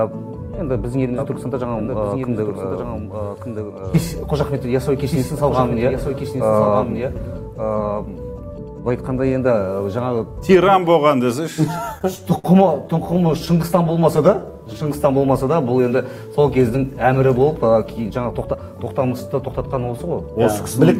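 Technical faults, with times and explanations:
1.18–9.20 s, doubled audio track. A second full-band copy of the audio runs about a second behind the original, roughly 5 dB quieter. It has no decay or room colour, so it sounds like a plain echo of everything. It appears and disappears abruptly at the edges of that span. The likely cause is a second capture of the same sound through a slower path, or an edit that left two copies out of step.
11.67–12.47 s and 12.88–14.21 s, repeated stalls (stutter). In the first run the receiver ran dry six times. The longest wait was about 53 ms, and 116 ms was filled in all. In the second run there were twelve shorter waits of up to 13 ms, filling 119 ms. Packets kept arriving late, so the last sound was stretched on each time. Nothing is lost, but the audio drags and stutters.
13.83–15.19 s, jitter buffer slow-down. The audio plays at about 91% speed with its pitch unchanged. 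Sounds are drawn out, and 131 ms is added overall. The receiver was short of buffered audio. It repeated single pitch periods and bits of pauses many times in a row to build a reserve. This overlaps the end of the second stutter run.
17.07–18.55 s, jitter buffer speed-up. The audio runs about 10% fast at the same pitch and sounds hurried. Roughly 150 ms is cut out. The buffer had built up more audio than it aims to hold. The receiver therefore dropped short pieces of a pitch period or a few, again and again, to bring the delay back down.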